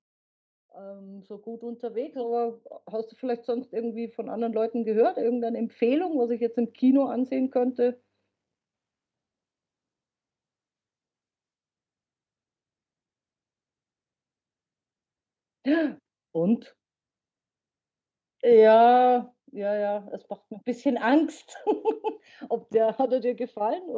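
From 0.75 to 2.68 s, and again from 3.21 to 5.71 s, automatic gain rising lifts the level by about 8 dB as the gain control chases a quiet input. Voice and background noise swell together over seconds, unlike a compressor's fast pumping, in speech already band-limited below 8 kHz.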